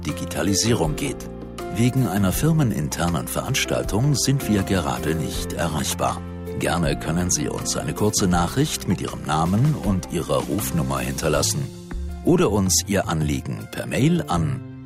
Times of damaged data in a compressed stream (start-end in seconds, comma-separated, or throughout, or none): none